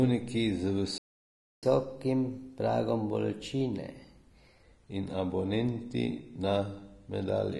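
Vorbis compression runs through the whole recording, most likely the cause of the grainy, hissy treble and roughened speech. The damage is plainly audible, which fits a low bitrate around 32 kbps.

A playback stall cuts the speech off at 0.98 s and leaves silence until 1.63 s, a gap of about 0.65 s. The player most likely starved of data or was blocked before resuming.

Catch-up at higher speed follows from 1.63 s to 4.63 s. The player resamples its backlog at 1.1 times normal speed, so the speech sounds hurried and about a semitone and a half higher before settling back.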